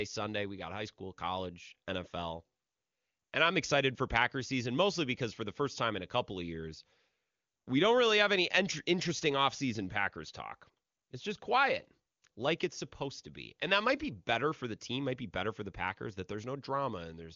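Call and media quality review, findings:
No faults found in speech audio.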